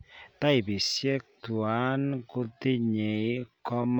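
From 0.8 s onward, a time-stretched section drags speech to 0.59 times pace; unlike slowed playback, pitch holds, likely from software stretching.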